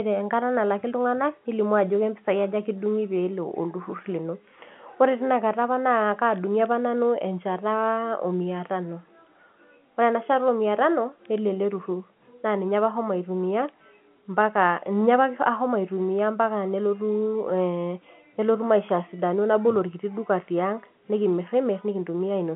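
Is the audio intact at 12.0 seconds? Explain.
Yes, the audio is intact at 12.0 seconds, with the speech carried cleanly through the G.711 telephone coding and its narrow line band.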